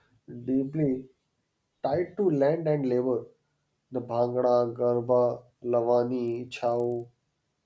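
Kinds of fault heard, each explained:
Resampler restarted on every block: from 6.28 s to the end, the speech carries a regular ticking at 25 Hz, one tick per 40 ms block. Each block was rate-converted in isolation, so the filter lacked true neighbouring samples at its edges, and the pattern fits a 24 kHz to 16 kHz conversion. A spectrogram shows thin vertical lines every 40 ms wherever signal is present, and the waveform shows small discontinuities at each block join.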